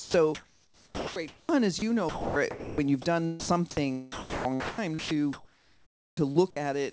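The audio comes through a call path whose content stops at 8 kHz, consistent with a G.722 wideband codec at about 64 kbps. Three stretches sound chopped by the voice detector, from 0.00 to 1.49 s, 2.09 to 3.05 s and 4.12 to 6.56 s. The sender's detector likely kept toggling between sending and muting, so about 1.16 s, 0.57 s and 1.56 s of those stretches were filled with synthetic comfort noise. On a spectrogram, these spans alternate between structured energy and flat, featureless noise bands that end abruptly. The waveform shows dense sections interrupted by even, low-level hiss. Two shorter gaps, from 1.79 to 1.82 s (30 ms) and from 3.40 to 3.49 s (90 ms), are sound dropped by the voice detector. Quiet material was likely judged to be background, so transmission stopped and steady comfort noise replaced it until the detector fired again. These show as narrow, uniform noise slots with sharp edges in the spectrogram and as brief flat-envelope dips in the waveform.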